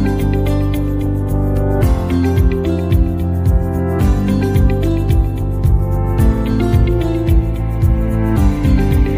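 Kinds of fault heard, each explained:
Dropped samples: a single sharp click at 4.91 s, likely from a fraction of a millisecond of the stream going missing, so the waveform leaps abruptly to a later value; a spectrogram shows one thin vertical line across all frequencies.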